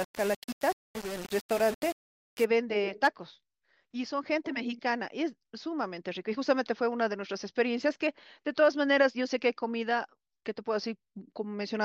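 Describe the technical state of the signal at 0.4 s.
At 0.4 s the speech is coarse and gritty, with grain that rises and falls with the level and quiet parts sputtering or dropping out. This is low bit depth without dither, running from 0.0 to 2.45 s, likely a rounding to about 5 bits with no dither. The rounding error sits only about 15 dB below the speech. Unlike steady hiss, this distortion follows the signal and vanishes in pauses.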